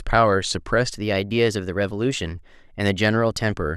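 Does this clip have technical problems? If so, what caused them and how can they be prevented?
Yes. From 0.90 s to 3.53 s the speech shows a wrong sample rate fault: it runs about 1.09 times too fast and sits roughly 1.5 semitones high, which fits 44.1 kHz material played back at 48 kHz without conversion. Unlike a pitch shift, where timing stays put, here tempo and pitch rise together by the same ratio, so the voice sounds both higher and hurried. Resampling to the device rate before playback prevents this.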